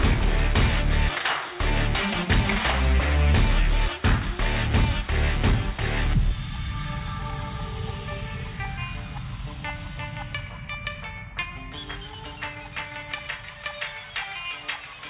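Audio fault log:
No faults detected anywhere in this audio.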